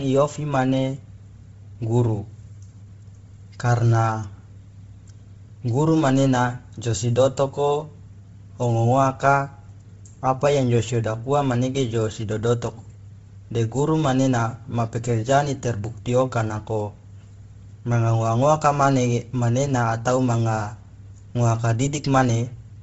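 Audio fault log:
Throughout, Bluetooth LC3 compression, likely: the speech has a heavy breathy, grainy edge with nothing above 7.7 kHz, and much of the upper band below that has been stripped and refilled with noise. The sound fits a low bitrate around 24 kbps with short 7.5 ms frames.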